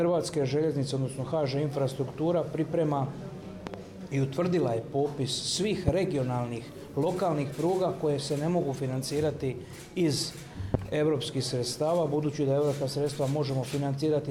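A sudden voltage pulse, likely from a switch, plug or driver glitch, enters the chain as a loud pop at 3.67 to 3.77 s (a double pop), 5.88 s and 10.74 s. Each is a sharp thump about 15 to 20 dB above the sound, which continues underneath.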